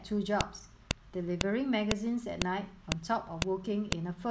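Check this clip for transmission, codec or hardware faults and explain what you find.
There is one fault: a file header played as audio, repeating through the speech. It sounds as a sharp click at 0.41, 0.91, 1.41, 1.91, 2.42, 2.92, 3.42 and 3.92 s, one every 0.5 s. The audio was joined or streamed as half-second WAV pieces without removing each piece's header. Those few dozen bytes of metadata are decoded as samples, producing a brief loud snap at every seam regardless of what the speech is doing.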